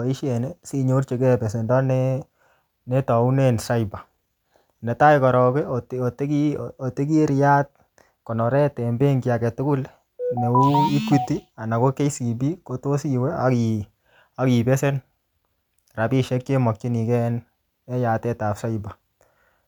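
Nothing in the speech recording stood out as a technical problem on listening.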